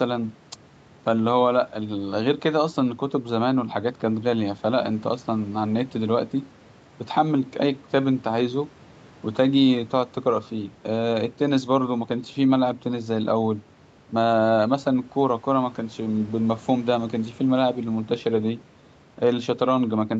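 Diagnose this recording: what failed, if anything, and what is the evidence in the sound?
Nothing failed here as far as I can hear: the speech simply carries the usual signature of a call chain, with the lowest bass trimmed by the microphone processing's high-pass and nothing above 8 kHz, which fits a normal Opus call path running at that bandwidth.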